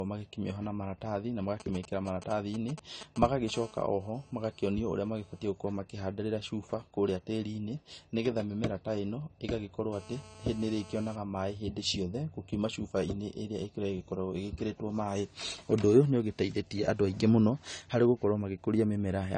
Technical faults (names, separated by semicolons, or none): low-bitrate audio saved at a high bitrate; GSM signalling bursts; GSM phone buzz